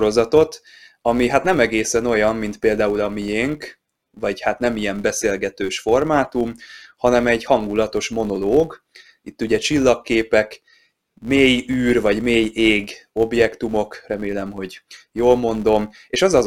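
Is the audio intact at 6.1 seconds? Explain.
No. The filter restarted on every block throughout, including at 6.1 s. Each block, which fits a 256-sample size, starts from silence and opens with a small transient, so a 188 Hz buzz rides along with the speech and rises and falls with its level.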